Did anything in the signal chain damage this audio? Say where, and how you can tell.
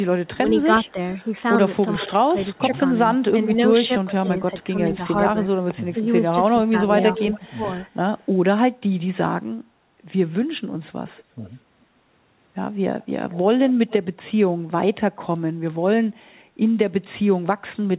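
Yes, and it's all in the call processing. There's an echo leak: a delayed copy of the speech trailing by about 430 to 465 ms, at 0.26–0.91, 2.55–2.78, 3.84–4.64, 7.13–8.26, 11.08–11.54 and 13.01–14.95 s. It ranges from about 35 dB down to only about 10 dB below the talker, loudest around 7–8 s. The far end likely had a loudspeaker whose echo canceller let some of its own playback back into the mic.

There's also speech suppressed in double talk, between 0.32 and 2.62 s and again between 3.72 and 7.61 s. The talker's level dips by up to roughly 10 dB in patches adding up to around half a second in the first stretch and about a second in the second, overlapping the echo bursts. That's likely the echo canceller failing to tell near speech from loudspeaker echo and ducking both. The band stops at 4 kHz, which fits a narrowband G.711 call path.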